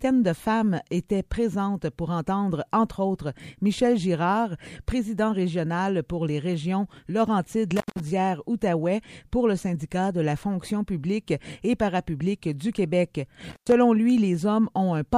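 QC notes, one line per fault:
7.76 to 8.00 s and 13.50 to 13.72 s: intermittent contact. Audio drops out for 159 ms and 107 ms with crackle at each edge, leaving faint hiss while a loose connection briefly opens.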